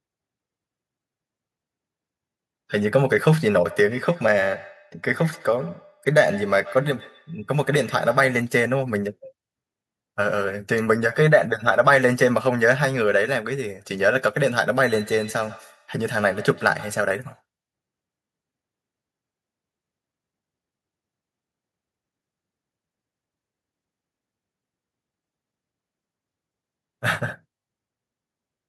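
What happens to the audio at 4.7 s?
At 4.7 s the speech is followed by a thin, ringing copy of itself, coming back about every 150 ms and sitting about 19 dB below the direct sound. This is feedback echo between two devices, running from 3.65 to 8.51 s. One device in the room plays out what the other's microphone sent, that microphone picks it up again, and neither echo canceller removes sound played by the other device.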